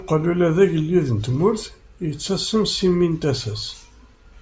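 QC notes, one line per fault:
Nothing stood out on listening to the speech in this clip.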